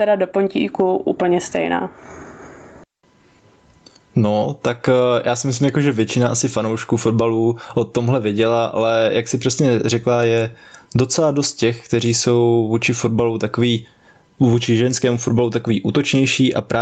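Throughout the speech, the gain swings by around 20 dB, so the level sounds squashed and breathing. This gain pumping is likely from the microphone gain being set far too high, with a fast limiter repeatedly pulling it down. The audio also stops at about 8 kHz.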